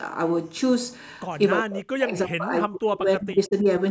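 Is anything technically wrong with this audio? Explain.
Yes. From 1.62 to 3.67 s the speech repeatedly sinks and drops out, sometimes by as much as 40 dB, adding up to about a second and a half of missing or thinned-out speech. This is speech suppressed in double talk. The likely cause is an echo canceller that heard both ends talking at once, could not tell this talker apart from the returning loudspeaker signal, and attenuated everything. The call microphone processing's band limit, with nothing above 8 kHz, is expected.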